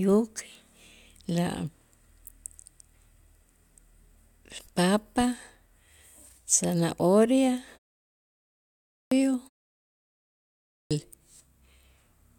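At 8.50 s and 10.36 s, a clipped start after a pause: the output sleeps and wakes late, losing 0.61 s and 0.55 s. Speech bursts abruptly from flat silence, its onset missing on the waveform and spectrogram.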